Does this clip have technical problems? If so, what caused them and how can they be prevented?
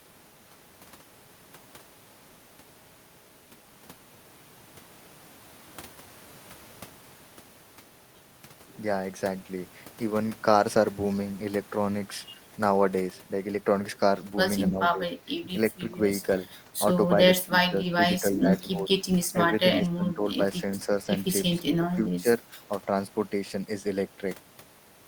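Yes. The speech dips in seven short stretches: 14.7–15.02, 15.18–15.47, 17.47–18.02, 18.21–18.9, 19.28–19.59, 19.79–20.39 and 21.79–22.26 s. Each loses between about 5 and 15 dB, a few hundred milliseconds at a time. This is likely speech suppressed in double talk: the echo canceller mistook the talker for loudspeaker echo and turned both down. Unlike a dropout, the sound is attenuated rather than silenced. Better double-talk detection or headset use prevents it.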